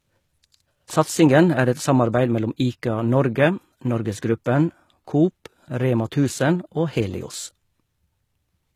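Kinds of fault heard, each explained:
HE-AAC compression: throughout, the speech's treble stays bright but sounds synthetic, with gritty, lispy s sounds. The likely cause is a codec that encodes only the lower band and rebuilds the top by copying it upward, fitting a bitrate near 20 kbps.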